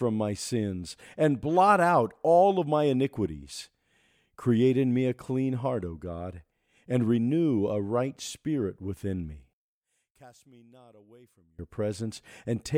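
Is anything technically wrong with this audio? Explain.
Yes. From 9.53 to 11.59 s, one channel inverted is the likely cause of what you hear: if one side of the stereo pair has its polarity flipped, the content shared by both sides cancels when they are combined to mono. Here the speech drops by about 28 dB over that stretch and turns faint, because only the small difference between the two channels survives the cancellation. Full level returns after 11.59 s.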